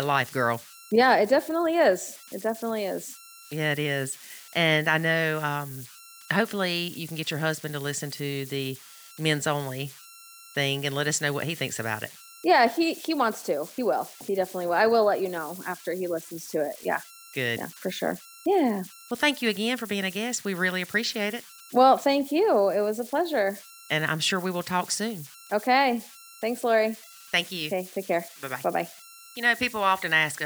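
Throughout the speech, converter idle tones whistle near 1.5 kHz, about 22 dB below the signal. An undithered delta-sigma converter cycles through repeating patterns, unlike broadband hiss.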